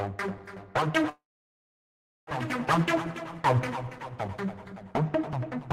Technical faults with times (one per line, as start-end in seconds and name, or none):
1.09-2.30 call audio freeze